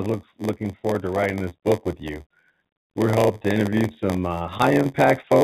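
Speech carries a steady 86.1 Hz buzz throughout and plays at 0.938 times normal speed, the sign of a block size mismatch (padded): short blocks zero-filled to fit a 512-sample read, unlike resampling, which would lower the pitch. From 3.11 to 3.98 s, and again from 4.38 s to the end, repeated packet loss (robotic sound) makes the audio choppy with pieces missing. The first stretch has ten gaps, with about a quarter of it patched and the longest hole 41 ms, distinct from the even buzz. The G.711 call path leaves nothing above 4 kHz.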